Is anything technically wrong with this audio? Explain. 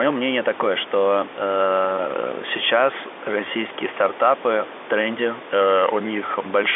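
No, nothing is technically wrong.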